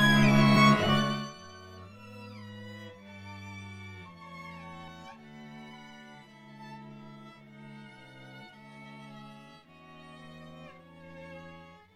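At 0.55 s and 4.87 s, compressed frames are skipped, about two frames and one frame, jumping ahead about 50 ms and 20 ms. Each join is visible as a waveform discontinuity.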